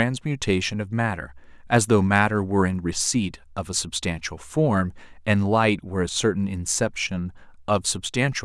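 From 6.09 to 6.16 s the speech suddenly sinks by about 6 dB for a brief 70 ms, then snaps back. This is likely one channel dropping out: with one stereo side lost, the mono sum keeps only half the shared signal.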